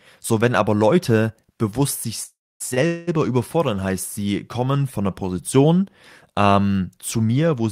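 After "bewusst sich", a call audio freeze at 2.23–2.62 s, likely packets held up in transit, stretches the last sound into a fading buzz, then about 0.26 s of silence, seen as a smeared band and then a flat gap. A short stall from a late packet at 2.74–2.79 s holds a sound about 24 ms too long, with a slight buzz or dip. A second freeze at 2.87–3.09 s fills about 0.21 s with a decaying buzz and no silence, a blurred stretch before "überfordern heißt sie" resumes intact.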